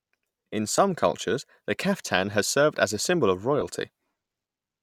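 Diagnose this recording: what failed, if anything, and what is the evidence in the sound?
Lost LE Audio frames on the Bluetooth codec link: brief noisy smears at 0.77 s, before "cultures the kaftan has", and 3.61 s, after "as a symbol of". Each fits one 10 ms LC3 frame filled with randomised reused spectrum, unlike a silent dropout.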